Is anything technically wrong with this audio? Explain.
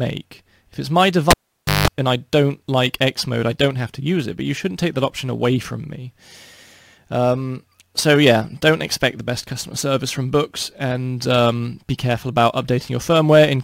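Yes: a cable pulled and plugged in, 1.31 to 1.88 s. A pop opens a 520 ms gap; then 180 ms of 50 Hz buzz as the tip touches, unlike a clean dropout.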